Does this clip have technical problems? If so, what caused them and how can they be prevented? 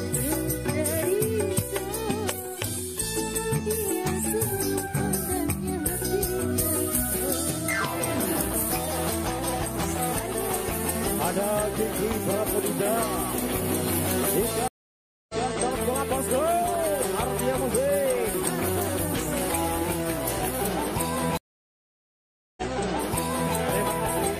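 Yes, there are two stream reconnects, at 14.68–15.49 s and 21.37–23.55 s. Each time the connection dropped, giving 0.61 s and then 1.2 s of silence. A fresh decoder then picked up a resent burst, replaying 0.19 s and 0.98 s of audio. A larger client buffer with position-aware resume would prevent this.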